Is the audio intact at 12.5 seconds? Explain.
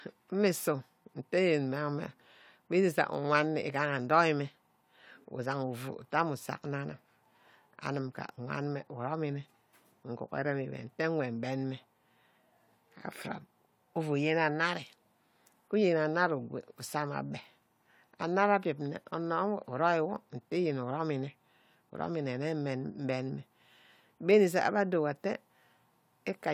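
Yes, the speech at 12.5 seconds plays through cleanly, with no dropout, click, distortion or other fault at that moment.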